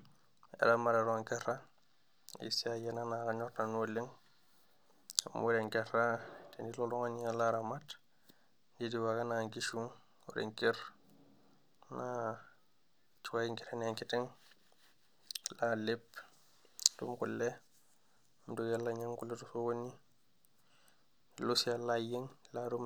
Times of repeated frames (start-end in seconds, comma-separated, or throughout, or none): none